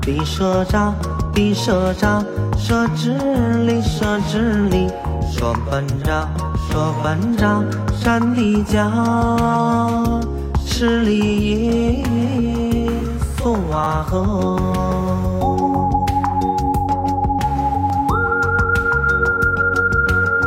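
A repeated buffer occurs at 4.62 to 4.64 s, 13.84 to 13.87 s and 17.9 s. Late audio made playback replay a tiny piece, which fits a 10 ms buffer. Each is a brief buzzy click.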